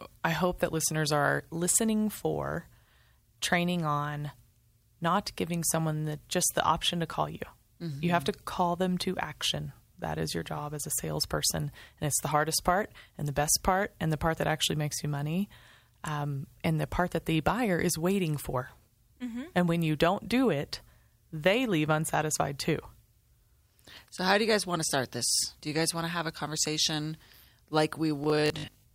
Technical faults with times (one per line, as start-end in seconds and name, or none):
28.24-28.94 robotic sound from repeated short buffers